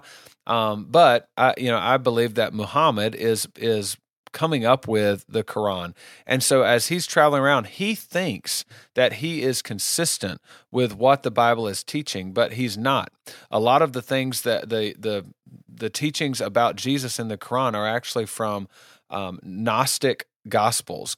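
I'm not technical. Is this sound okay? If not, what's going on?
Yes, the recording is technically sound, with no faults in the signal at any point.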